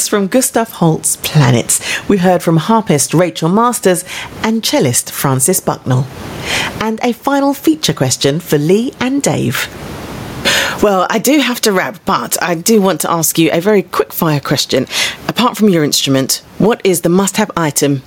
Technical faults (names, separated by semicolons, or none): gain pumping